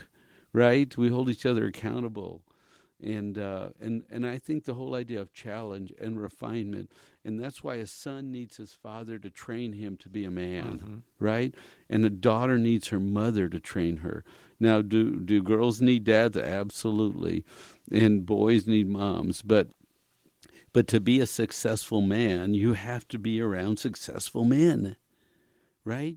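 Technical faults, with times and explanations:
No technical faults detected.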